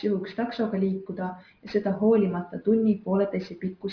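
Aliasing runs through the whole speech clip. The sound fits a drop from 48 kHz to 11 kHz made without an anti-alias filter, so content above 5.5 kHz folds back below it as unrelated tones, roughly 30 dB under the signal, making sibilants gritty and metallic.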